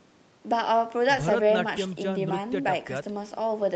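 No technical faults are audible.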